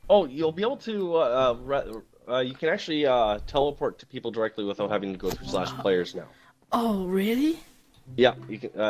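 No technical faults are audible anywhere in this audio.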